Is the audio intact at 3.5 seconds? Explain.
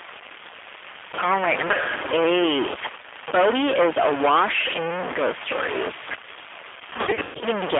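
No. At 3.5 seconds the speech carries two faults, and both run through the whole clip.

The first sounds like a stuck bit. The speech has a distortion laid over it. The pauses are not silent either. They fill with noise. This is likely one data bit held at a fixed value. Roughly half the samples then land off by that bit's weight, in a pattern that follows the waveform. Small values near silence keep flipping the error, which is why the gaps hiss.

The second is G.729 codec damage, plainly audible. The sound fits G.729A at about 8 kbit/s. This coder does not store the waveform. It rebuilds speech from a vocal tract model, a pitch predictor and a few pulses per frame. The band runs only from 300 Hz to 3.5 kHz, so the speech sounds thin and muffled. It also has a slightly rough, synthetic edge, and any background noise warbles.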